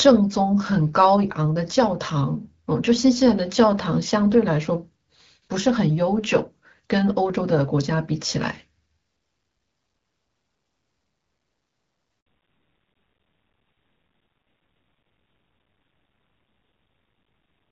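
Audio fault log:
12.20 to 12.26 s, handover gap: the speech cuts out for 60 ms, dying away quickly into silence before resuming. No frames reached the decoder while the call switched networks, so this is a clean hole rather than the garbled or repeated fragments of packet loss concealment.
12.26 s onward, fallback to narrowband: from the moment speech returns, everything above 4 kHz is gone and the voice sounds duller and rougher. The call dropped from HD Voice at 12.65 kbit/s to narrowband AMR, likely at 7.4 kbit/s. Unlike a brief filter glitch, the lost treble never recovers.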